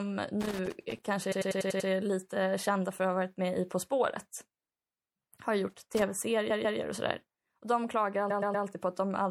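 Speech recording with three kinds of fault. Throughout there is plainly audible MP3 compression damage, most likely from an encode at around 64 kbps: sibilants sound watery and swirly, and on a spectrogram the treble stops at a hard shelf while the upper bands break into flickering on-off patches. Loose connector crackle appears from 0.41 to 1.05 s, just before "kanske är lite kända", and again from 5.70 to 6.02 s. Each time an intermittent contact chops the signal into an irregular scratchy burst, which shows on the waveform as dense, spiky vertical slivers. Repeated frames cause four stutters. From 1.31 to 1.89 s a 96 ms block plays six extra times. At 4.77 to 4.91 s a 72 ms block repeats twice. From 6.49 to 6.78 s, just before "och sådär", a 144 ms block repeats twice, and from 8.29 to 8.65 s a 120 ms block repeats three times. Each repeat shows as identical waveform copies side by side.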